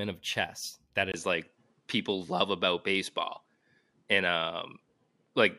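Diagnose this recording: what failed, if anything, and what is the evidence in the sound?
Right after "of chess that", a 20 ms gap at 1.12 s gives way to duller speech with nothing above 11.4 kHz, a level shift of about 5 dB and faint new background noise. The likely cause is an input switched to a poorer device at the driver stage.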